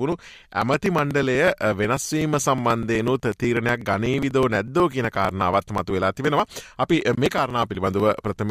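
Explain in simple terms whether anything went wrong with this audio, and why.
Periodic USB or driver dropouts: from 0.12 to 8.37 s, a couple of milliseconds gets skipped every 0.123 s, giving steady ticks.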